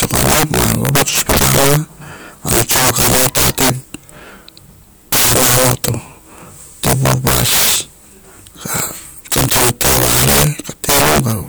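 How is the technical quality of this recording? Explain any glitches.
Poor: integer overflow runs through the whole speech recording. Gain about 16 dB too high wraps the roughly 7% of samples over the limit to the opposite sign, giving violent cracks far harsher than clipping's flattened buzz.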